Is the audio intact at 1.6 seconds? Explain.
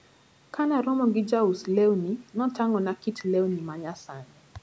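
Yes, the speech at 1.6 seconds is intact: it carries only the ordinary effects of call microphone processing, with the lowest bass trimmed and nothing above 8 kHz.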